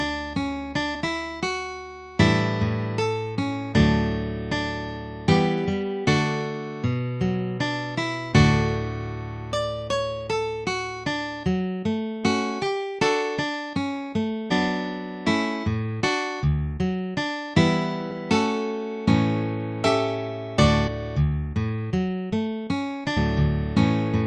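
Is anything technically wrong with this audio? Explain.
Yes: there is damaged data in a compressed stream at 14.50 s, 20.86–20.89 s and 23.16 s. Corrupted bytes make the decoder misread the frames there and lose sync while it searches for the next valid frame header, so each spot is a brief chirp or blip.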